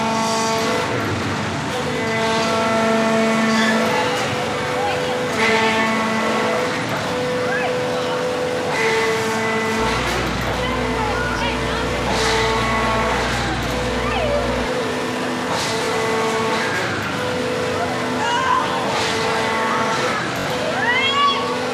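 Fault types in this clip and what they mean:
repeated buffer: brief stutters near 11.39, 15.85 and 20.4 s, the last repeating three extra times; late audio made the device replay its previous 21 ms buffer.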